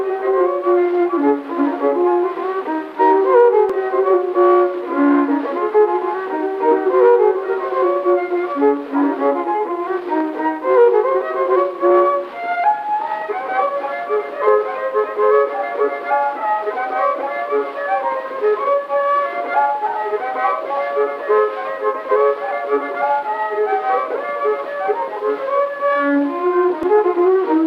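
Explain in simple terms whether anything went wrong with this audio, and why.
Two brief glitches at 3.70 s and 26.83 s come from damaged data in a compressed stream: the decoder lost its place there, unlike a plain click or dropout.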